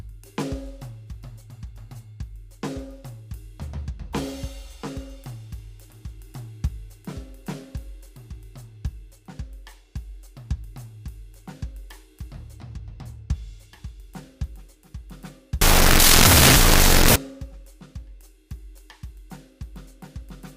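A wrong sample width fault runs from 15.61 to 17.16 s in this music clip. Samples stored as 16-bit integers are read back as unsigned 8-bit values, so each original sample becomes two separate bytes. Only the high bytes carry the real waveform. The low bytes turn into loud, harsh noise with the music buried underneath, and the doubled sample count plays the passage at half speed, an octave lower.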